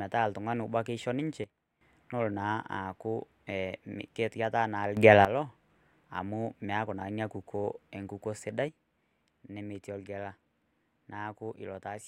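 Speech with three sudden gain jumps, likely from digital gain being switched from one sample to the next with no ramp. The level drops by about 13 dB at 1.44 s, after "oltung'ani obo etaa keisho", and recovers at 1.81 s before "nelo naa aaku". It rises by about 12 dB from 4.97 s to 5.25 s. It falls by about 6 dB from 8.68 s, after "naa ina kukuo enkukuo", to the end. Speech and background noise shift together, so the waveform envelope shows square steps, and the spectrogram shows sharp vertical edges where the whole band changes brightness at once.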